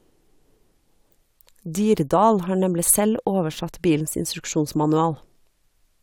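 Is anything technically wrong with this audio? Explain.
No, nothing technically wrong stood out on listening to this speech recording.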